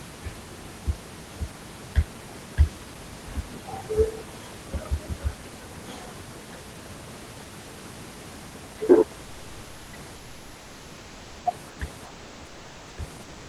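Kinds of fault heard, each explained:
comfort noise in place of the background: In the pauses at 10.15 to 11.45 s, 11.69 to 11.79 s, 12.05 to 12.97 s and 13.23 s to the end, the room background turns into a smooth, characterless hiss, about 1 to 3 dB quieter than the real background. The likely cause is discontinuous transmission in an Opus call, with the receiver synthesising noise while the sender is silent. On a spectrogram those stretches show a flat, evenly smeared texture with none of the background's fine detail, and the waveform envelope sits level and slightly lower.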